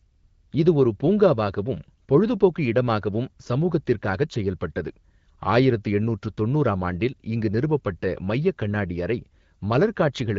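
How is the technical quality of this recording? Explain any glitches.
No glitches can be heard in this speech recording: it carries the band-limited character of the AMR wideband (HD Voice) codec at 12.65 kbit/s, with only light coding roughness and nothing above 7.5 kHz, and nothing interrupts or disturbs the signal.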